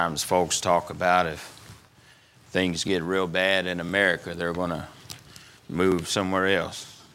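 Overlapping chunks cause a short click or stutter at 0.85, 1.87, 2.88, 3.89, 4.91 and 5.92 s. The audio was handled in 1.0 s blocks, each starting about 13 ms before the previous one finished, so that sliver plays twice at every join.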